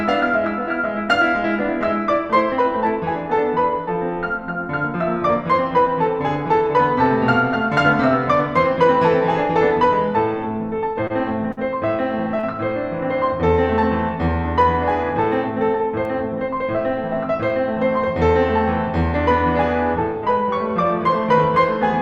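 Around 10.93, 11.07, 11.52 and 12.40 s the music hitches in four short stalls from a late packet. Each time the jitter buffer ran dry, so the last bit of sound got stretched, for 18, 27, 52 and 37 ms, then picked up where it left off. You hear a brief held smear with a faint buzz or dip.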